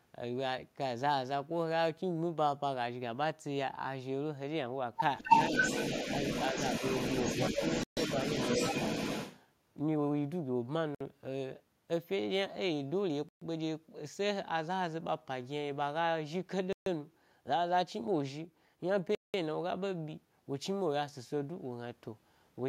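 From 5.18 s to 9.43 s an echo leak runs under the speech: a second copy of the voice trails the original by 260 ms at about the same loudness, so each phrase sounds doubled and smeared. The likely cause is a loudspeaker at the far end whose echo canceller let its own microphone pickup return down the line. On a spectrogram every syllable's harmonic stack repeats a quarter-second later at similar brightness, and the waveform envelope shows overlapping bursts where there would be gaps.

Inside that stretch, speech is twice suppressed in double talk. At 5.2 to 5.3 s the voice drops sharply, by roughly fifteen decibels, for about a tenth of a second. At 7.52 to 7.61 s a shallower dip of a few decibels lasts a little less. Both sound like the voice briefly ducking. They are likely the canceller mistaking talk for echo and attenuating everything at once. The waveform shows a short notch in amplitude, and the spectrogram a brief fade across the band.

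Five Bluetooth stalls cut the sound to dead silence: at 7.83 s for 135 ms, 10.95 s for 58 ms, 13.29 s for 129 ms, 16.73 s for 136 ms and 19.15 s for 190 ms. Playback halts abruptly and resumes, likely because radio interference delayed packets until the headphone buffer emptied. In the waveform each appears as a flat near-silent line with hard edges. On a spectrogram each is a clean vertical blank stripe spanning all frequencies.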